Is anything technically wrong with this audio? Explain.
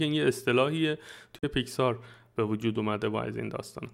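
Yes, two separate kinds of frame damage are audible in this speech.

A corrupt frame muted at 1.39 to 1.44 s: the decoder rejected damaged compressed data and the player substituted silence. The result is a hole of about 54 ms, which fits two dropped frames, that begins abruptly while the timing stays intact.

A corrupt frame decoded at 3.66 to 3.68 s: flipped bits were played through, so misread values put energy at the wrong frequencies for a couple of frames. It is a brief faint artifact, peaking at about -45 dBFS.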